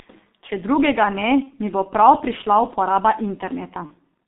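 G.723.1 codec damage runs through the whole of this speech recording: the band is squeezed to about 200 Hz–3.6 kHz, and the slow, coarse voice model, consistent with a roughly 6 kbit/s stream, leaves the voice heavily muffled and hoarse with smeared consonants. VoIP packet loss concealed by the speech codec appears at 1.43–1.58 s, between "drugega ne" and "mi bo prav prišla", and again at 3.86–3.92 s. Each gap fits a single missing 30 ms frame that the decoder filled by extending its last pitch and filter at falling gain, so the sound is briefly stretched and weak and takes a moment to recover.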